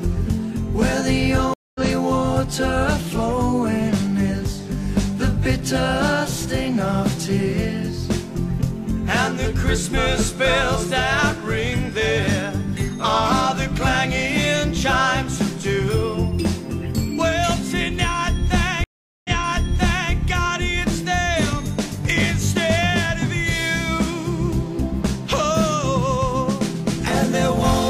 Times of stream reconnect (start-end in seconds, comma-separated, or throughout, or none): 1.54-1.81, 18.84-20.13